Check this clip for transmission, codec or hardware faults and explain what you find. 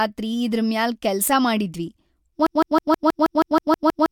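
One fault: a broken-record loop from 2.47 s to the end. A 160 ms fragment of the speech repeats exactly, back to back, about ten times. This is likely a stalled player or stream resending its last buffered piece, so the intended audio is lost.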